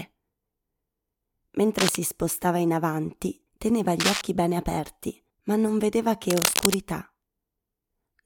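Cable scratch noise breaks into the speech at 1.78–1.96 s before "spostava in avanti teneva", 4.00–4.21 s before "bene aperti ma non", and 6.30–6.77 s after "aperti ma non vedeva". Each is a dense, ragged rustle roughly as loud as the voice, likely from a worn connector being disturbed.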